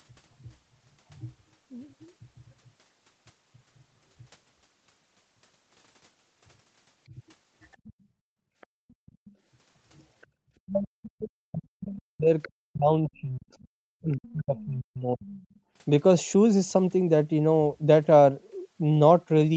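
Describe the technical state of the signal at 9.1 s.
At 9.1 s you're inside the background gated by the echo canceller, running 8.0 to 9.28 s: the canceller clamps the mic while the loudspeaker plays, so room sound sinks by up to about 40 dB. On top of that, from 8.61 to 9.3 s, a faint second voice sits well below the main speech, most likely the other side's voice leaking through because the echo canceller didn't fully remove it.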